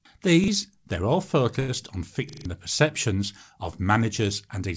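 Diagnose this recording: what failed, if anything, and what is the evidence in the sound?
Two separate faults in the driver/buffer stage. At 0.44 to 0.48 s, just before "they're all", a roughly 40 ms chunk plays twice with a hard seam, so you get a quick stutter. It's worse at 2.29 to 2.45 s, just before "the perceptions of": the same chunk repeats four extra times, giving a longer stutter, and around 150 ms of real audio never gets through. That's a repeated buffer. New data didn't reach the device in time, so it replayed the last block, and the repeat length points to a 40 ms buffer.

The second fault is at the network/jitter-buffer stage, a short stall from a late packet at 1.60 to 1.70 s, right after "they're all". The sound holds and drags for about 82 ms, then picks up exactly where it left off. Nothing's missing. The jitter buffer ran dry, the receiver stretched the last sound to cover the gap until the packet arrived, and everything after that point sits about 82 ms later. 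The call path itself is fine, with nothing above 8 kHz, which fits a wideband call codec like G.722.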